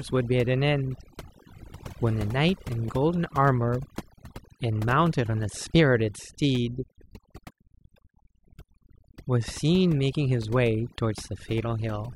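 Throughout the recording, overdone noise removal is at work: the noise reduction was pushed too hard, so any frequency band close to its noise estimate gets pulled down or shut off. The background drops and breaks up into twinkling specks.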